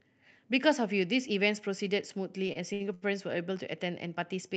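From 2.47 to 3.04 s the speech drags and hitches: four times it catches and holds, the last sound stretched out briefly, the longest hold about 79 ms, before moving on with nothing skipped. These are repeated stalls (stutter). Packets arrived late, so the call's jitter buffer ran dry each time and the receiver extended the preceding audio until data returned. About 187 ms, a third of that stretch, is filled in, all heard through the call codec's band limit near 8 kHz.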